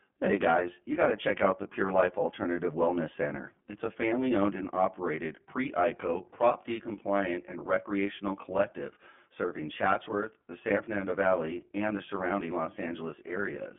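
From start to finish the speech carries channel delay comb filtering: one channel trails the other by around 20 ms, and summing them to mono cancels shared content at evenly spaced frequencies starting near 30 Hz, leaving a rough, slightly doubled quality.

The whole clip also passes through the iLBC codec. The band is confined to roughly 150 Hz to 3.4 kHz, with nothing above 3.6 kHz. The independently coded excitation, which fits 20 ms frames at 15.2 kbps, makes the speech plainly rough and synthetic.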